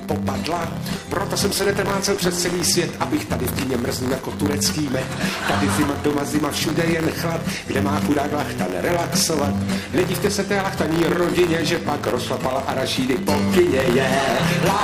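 Buffer tearing runs through the whole clip, from start to finish. The write and read positions in the playback ring buffer have drifted until they cross within each period, so a small slice of every buffer, a few percent, holds stale audio from about 20 ms before, butted against the current signal with hard joins. Those splices repeat a hundred times a second, giving a rough, robotic 100 Hz buzz that rides on the sound and drops away whenever it falls silent.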